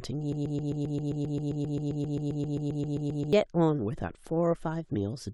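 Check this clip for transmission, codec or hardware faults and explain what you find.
One fault is present: a broken-record loop from 0.33 to 3.33 s. A 132 ms fragment of the speech repeats exactly, back to back, 23 times, most likely from a stalled player or stream resending its last buffer, so the speech due in that span is lost.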